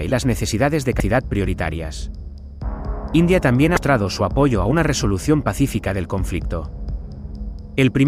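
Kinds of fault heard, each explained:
Damaged data in a compressed stream: part of the encoded bitstream is corrupt, so the decoder cannot read the affected frames correctly, loses synchronisation and has to search for the next valid frame header before normal output resumes. Here this happens twice, as brief disruptions lasting about 34 ms each, from 0.97 to 1.00 s and from 3.74 to 3.77 s, where the audio briefly breaks up before clean decoding returns.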